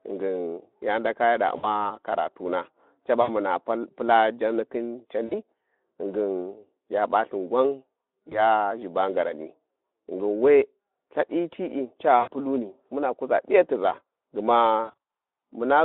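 At 1.57 to 1.67 s, 3.21 to 3.29 s and 5.25 to 5.43 s, then 8.29 to 8.42 s, 12.19 to 12.31 s and 14.84 to 14.94 s, the speech shows VoIP packet loss concealed by the speech codec. The decoder extends its last pitch and filter state while lowering the gain, so the speech smears into a buzzy tone or coloured noise that fades. Gaps run from about 20 ms to 80 ms. The final event scatters about 140 ms of loss over roughly 240 ms, with runs up to 60 ms, within the narrow 250 Hz to 3.6 kHz Speex band.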